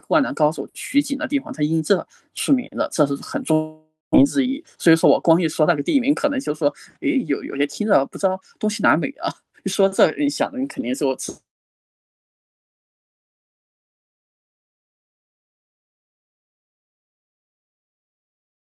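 At 3.53 s the speech cuts out in a long network dropout, likely from packets that never arrived. The receiver stretches the last sound into a fading buzz, which ends in 190 ms of silence. Speech returns at 4.16 s, with 400 ms missing.

A jitter buffer speed-up follows, from 4.23 s to 7.08 s. The receiver trims tiny pitch-period slices repeatedly to shed about 200 ms of built-up delay. Speech runs at 106% speed. The pitch stays the same, but delivery sounds slightly hurried.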